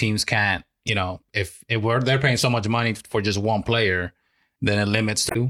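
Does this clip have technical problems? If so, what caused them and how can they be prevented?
Yes. This speech clip has damaged data in a compressed stream, heard as brief disruptions at 0.85–0.90 s and 5.27–5.36 s. Corrupted bytes made the decoder misread frames and lose sync until it found the next header. Verify stream integrity with checksums and reliable transport.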